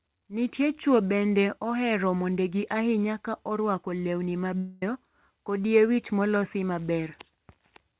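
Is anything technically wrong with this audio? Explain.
Yes, there's a likely long network dropout from 4.58 to 4.83 s, right after "ahinya ka orwako lewni." About a quarter second of audio never arrived, so the receiver stretched the last sound into a fading buzz or hiss to cover it, and the speech resumes with that chunk gone. The band-limited sound, with nothing above 4 kHz, comes from the call codec.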